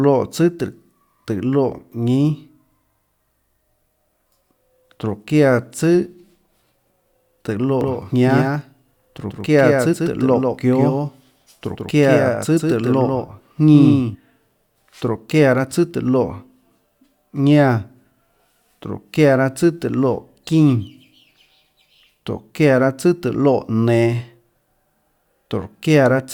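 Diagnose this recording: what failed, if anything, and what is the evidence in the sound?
Doubled audio track, 7.81 to 14.15 s: an abruptly starting, roughly 5 dB quieter full-band copy trails around 150 ms behind, likely from a second, slower capture path.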